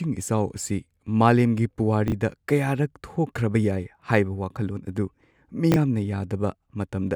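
At 2.08 to 2.12 s and again at 5.72 to 5.76 s the speech has chunks out of order: a 20 ms chunk arrives one chunk late and plays after its neighbour, so two short pieces swap places. Each swap leaves three hard joins, heard as a brief jumbled flutter. Unlike a dropout, no audio goes missing and there is no gap or silence, only the wrong order.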